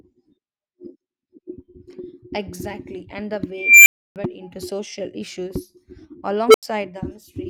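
Speech clip with an unstable filter firing twice: at 3.55 s a tone around 2 kHz swells over 315 ms, clips, then drops to 299 ms of silence; at 6.49 s a lower one near 400 Hz blows up in 56 ms and goes quiet for 85 ms. That's a recursive filter with bad coefficients overflowing until it resets.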